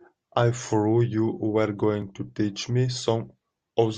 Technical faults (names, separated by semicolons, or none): overlap between stream segments